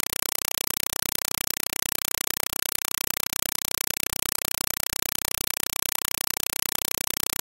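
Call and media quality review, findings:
Compressed stream played as audio, entire clip. Speech replaced by very loud, chattering static. S/PDIF or HDMI path passing AC-3 frames as PCM samples, not decoded. Each frame is a 4 ms noise burst, repeating at 31.25 Hz with zero padding between. Spectrogram: evenly spaced broadband vertical stripes separated by silent gaps. Waveform: dense high-level blocks. Burst density fits a 192 kbps AC-3 stream.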